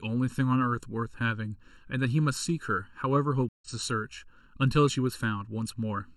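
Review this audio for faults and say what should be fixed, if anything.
The whole clip has a hollow, phasey colour from channel delay (comb filtering). One channel sits a bit under a millisecond behind the other, and when the two get summed to mono, the shared parts of the speech cancel at regularly spaced frequencies. The first notch lands around 700 Hz, and further dips repeat up the spectrum at roughly 1.4 kHz intervals. That's why the voice sounds thin and boxy the whole way through. To prevent it, time-align the channels before any mono fold-down.

There's also a stream reconnect from 3.49 to 3.68 s. The audio drops out for 135 ms, and when the speech comes back it has jumped ahead by roughly a tenth of a second, so that bit of speech is simply gone. The connection broke, the player went quiet, then reconnected and spun up a fresh decoder mid-stream, which is why the restart is a little soft as it comes back in rather than picking up cleanly. 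Buffering more on the client and resuming from the last received position would prevent it.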